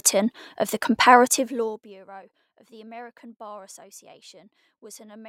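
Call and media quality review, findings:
Zipper noise, 1.24 to 2.0 s, from "of the" to "of the": ticking under the speech during a level drop of roughly 25 dB. Gain applied in unsmoothed 1 dB steps, about 50 a second, likely a per-buffer update in the gain stage, each step clicking.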